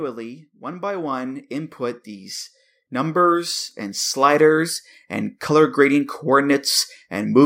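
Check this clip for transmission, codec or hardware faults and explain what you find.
One fault is present: automatic gain rising, from 0.64 s to 5.8 s. The gain control judged the incoming level too low and kept raising its amplification step by step, adding about 15 dB over roughly five seconds. Because the boost applies to everything it receives, the speech and the background noise beneath it grow louder together, so the whole clip swells steadily rather than the talker simply getting closer or speaking up.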